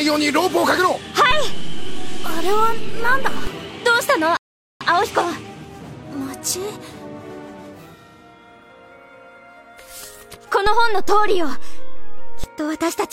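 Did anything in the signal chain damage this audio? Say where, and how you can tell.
Yes. Two DC steps point to the converter or analogue input stage. The zero line of the waveform jumps at 1.31 s and holds until 3.47 s, then returns. It jumps again at 10.67 s and holds until 12.44 s. Each jump is heard as a low thump or click. The sound carries on unchanged through both offsets. That fits a converter recalibrating or an offset input being switched in.

A rebuffering stall sits in the network and playback buffer stage. At 4.37 s the sound cuts to silence. It resumes at 4.81 s, exactly where it stopped. Nothing is missing, but 438 ms of dead time is added. The player ran out of downloaded audio and waited for more to arrive before continuing. The clean restart, with no skipped material, separates this from packet loss.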